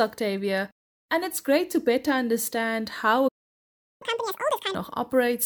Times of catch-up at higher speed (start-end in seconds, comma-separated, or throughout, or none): 4.02-4.75